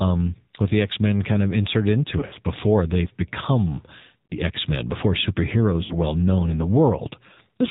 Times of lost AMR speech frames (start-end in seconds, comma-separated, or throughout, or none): 2.20-2.37, 4.26-4.35, 5.84-5.94